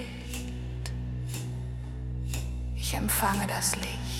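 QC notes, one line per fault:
No faults found.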